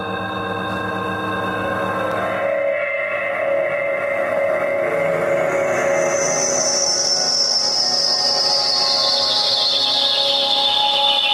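No technical faults can be heard anywhere in this recording.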